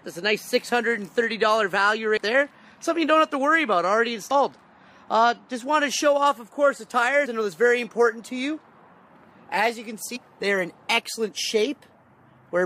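Damaged data in a compressed stream shows up four times in this audio, at 2.16 s, 4.30 s, 7.25 s and from 10.15 to 10.17 s, each a disturbance of about 20 ms. At those points part of the encoded data was wrong, so the decoder misread or rejected the affected frames, lost its place and hunted for the next valid frame header before playback resumed, leaving a short glitch each time.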